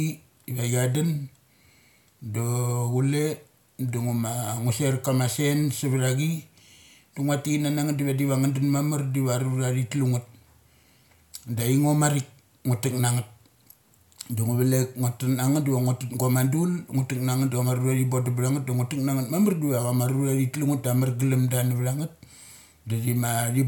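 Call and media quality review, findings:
Nothing to flag here, the speech comes through without any audible faults worth a ticket.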